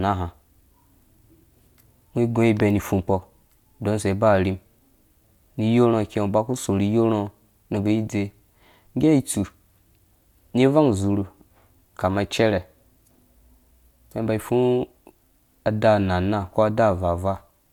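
No technical faults are audible.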